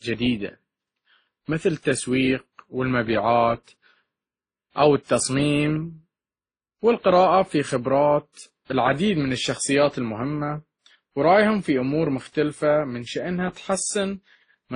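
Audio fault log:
Throughout, transcoding between lossy codecs: the signal was likely passed through several lossy encoders in turn, with the artefacts pointing to a low-rate MP3-style stage, then an Opus-like one, then a WMA-style final encode. Each later stage spent its scarce bits re-coding the earlier damage and added its own, so the different artefacts are heard together on the speech, and nothing survives above about 10.1 kHz.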